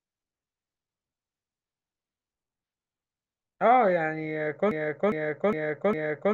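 A broken-record loop begins at 4.71 s in this speech recording and lasts to the end. The same 0.41 s fragment repeats exactly four times, back to back, so the audio that should follow is lost. A stalled player, encoder or stream resending its last fragment is the likely cause.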